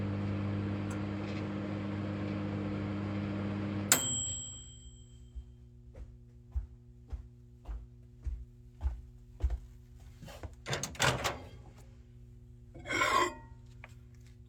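From the very start to the end there's a steady mains hum sitting under everything, a low 60 Hz tone with a few harmonics above it, roughly 20 dB below the sound. That's power-line leakage, probably a ground loop or a transformer close to the cabling.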